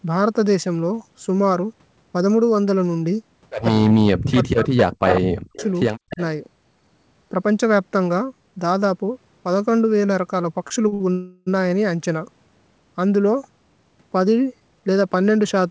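From 3.79 to 5.59 s, and again at 6.06 to 6.19 s, the speech dips by up to about 40 dB in pieces: speech suppressed in double talk, likely from an echo canceller turning down both its own talker and the loudspeaker echo. Echo leaks sit at 5.08 to 5.2 s, 5.53 to 5.67 s and 6.11 to 6.21 s, where a copy of the speech returns 145 ms late. It is about 5, 15 and 20 dB below the speech. Short stalls from late packets at 10.68, 10.88 and 10.94 s hold the sound for 21, 38 and 59 ms while the jitter buffer waits, with nothing lost. A call audio freeze from 11.12 to 11.48 s stretches the last sound for 346 ms into a fading buzz or hiss before the audio resumes where it stopped. From 14.60 to 15.30 s a jitter buffer speed-up trims about 100 ms of pitch periods, so the speech runs at 113% with unchanged pitch and sounds hurried.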